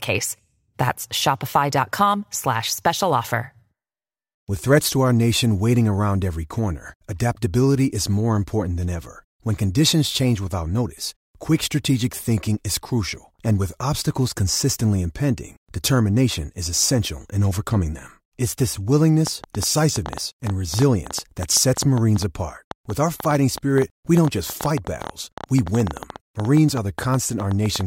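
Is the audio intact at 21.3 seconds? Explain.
No. A train of clicks runs from 19.27 to 27.82 s, about 8.2 irregular pops per second, likely interference, showing as thin vertical spectrogram lines and waveform spikes.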